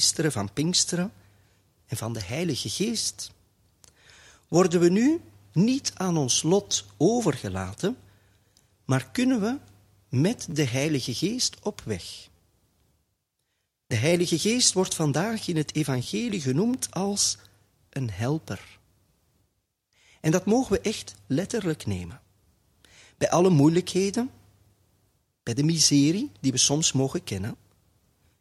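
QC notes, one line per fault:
10.51–17.88 s, repeated buffer: five brief stutters at 10.51, 12.37, 14.10, 16.03 and 17.88 s, about every 2 s, where one slice of roughly 11.6 ms, which fits a 512-sample buffer, plays again two, three, two, two and one extra time with a hard join at each repeat. Being so short, each is heard as a click or brief buzz. Unlike a dropout, no audio is lost and nothing falls silent: the same slice recurs and the sound resumes intact.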